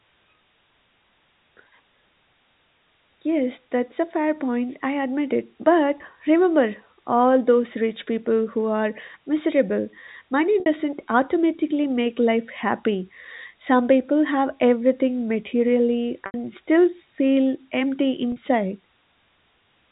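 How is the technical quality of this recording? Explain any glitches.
Four brief dropouts mar this telephone-band speech, whose G.711 coding leaves nothing above 4 kHz. Packet loss with pitch repetition occurs at 5.98–6.00 s (after "point I admit it"), 10.60–10.66 s, 16.26–16.34 s (before "still feel empty") and 18.32–18.36 s. These gaps of 20, 60, 80 and 40 ms fit lost 20 ms packets. The receiver loops the last pitch period, so short gaps sound like a held, buzzy note, and longer ones fade into silence. On a spectrogram, frozen flat harmonics appear. On a waveform, identical repeating cycles taper in amplitude.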